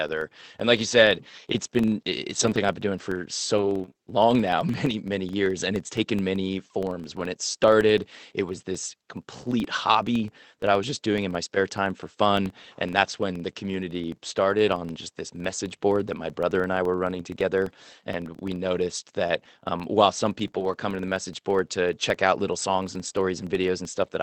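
Speech carrying a filter restarted on every block across the whole clip: each block starts from silence, leaving a small tick that merges into a buzz near 23.4 Hz, which fits a 2048-sample block. Unlike mains hum, it rises and falls with the speech level and disappears in pauses. The call codec's band limit near 8 kHz is also audible.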